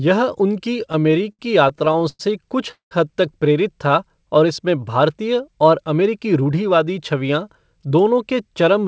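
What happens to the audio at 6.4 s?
A jitter buffer speed-up runs from 5.94 to 6.94 s. With audio piling up after a late burst of packets, the receiver trims short pitch-period slices repeatedly, cutting about a tenth of a second. The speech plays roughly 10% faster at unchanged pitch and sounds hurried.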